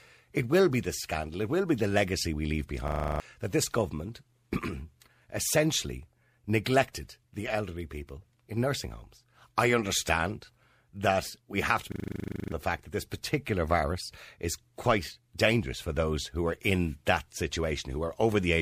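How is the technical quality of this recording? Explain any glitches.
Two system hang loops break up the speech. At 2.88–3.2 s, after "the legacy we leave", and 11.92–12.52 s, after "that we have to", the system froze while one 40 ms buffer kept replaying, producing a 25 Hz buzz and swallowing roughly a third of a second, then over half a second, of speech.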